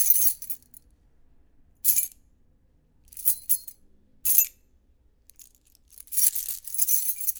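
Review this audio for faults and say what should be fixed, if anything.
Nothing needs to be fixed, as no faults turn up in this audio.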